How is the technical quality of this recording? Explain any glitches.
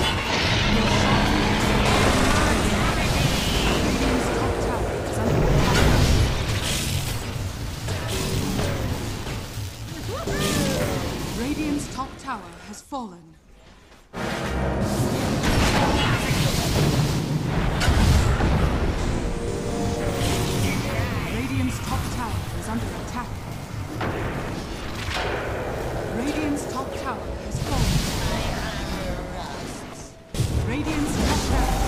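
One glitch stands out: a brief stretch of chunks out of order from 25.97 to 26.00 s. One 10 ms block of audio was delivered late and slotted in two chunks after where it belonged, so the stream plays its neighbours first and the delayed block afterwards. Nothing goes missing, but the reshuffled 30 ms window has three abrupt seams where mismatched waveforms meet. The result is a tiny jumbled flutter.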